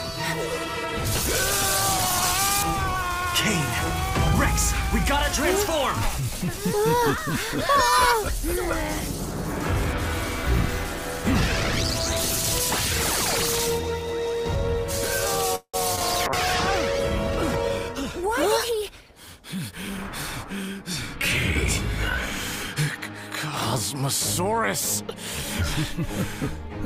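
At 15.55 s the audio stalls for about 0.18 s: the last sound carries on as a fading buzz, sinks into roughly 80 ms of silence, then picks up exactly where it left off with nothing lost. That's most likely a call audio freeze, with packets held up long enough to drain the jitter buffer.

Right after, at 15.96 s and again at 15.99 s, there are two quick smears of short concealed packet loss. Each time about 20 ms of audio never reached the decoder, and the receiver patched the hole by stretching out the preceding sound before blending back in.

From 16.28 s to 21.77 s there's a call bitrate drop, from 64 down to 16 kbps after the bandwidth estimate fell. The encoder codes much more coarsely at that rate, so the audio turns rough and muffled, sitting at its lowest for about 1.5 s before recovering.

Overlapping that, from 17.88 s to 19.73 s, there's a jitter buffer speed-up. The buffer was holding more audio than it wanted, so the receiver clipped out short pitch-period chunks, around a tenth of a second in all. 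The audio runs about 6% fast at unchanged pitch and feels slightly hurried.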